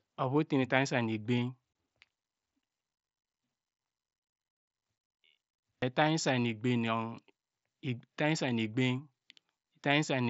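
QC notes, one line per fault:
1.73–1.75 s, unconcealed Bluetooth headset packet loss: a 22.5 ms hole with abrupt edges, fitting about three dropped mSBC voice packets replaced by silence or an idle pattern.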